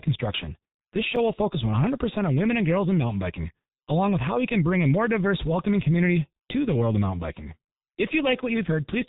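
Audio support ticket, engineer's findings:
G.723.1 codec, whole clip. Speech heavily muffled and hoarse, consonants smeared, no content above 4 kHz. Low-rate telephony encode at about 6.3 kbit/s, 30 ms frames; slow-updating voice model cannot track fast articulation. Check the transcoding stage.

Block of digital silence at 1.16 s. Brief tick: audio drops out for about 5 ms and resumes without fade. Length fits one unfilled 256-sample output buffer, an underrun in the playback or processing callback.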